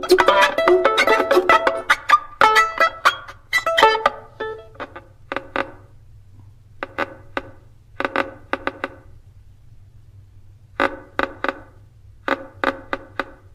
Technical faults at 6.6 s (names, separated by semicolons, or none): none